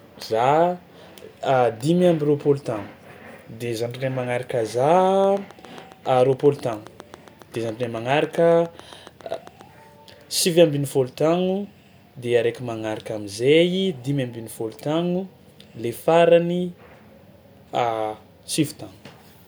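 Something, likely interference from nearby equipment or a faulty connection or power supply, injects a pulse about 7.3 times a second from 5.24 to 9.62 s, just after "magnaraka za". The result is a train of clicks: some thirty evenly spaced ticks, about as loud as the speech itself.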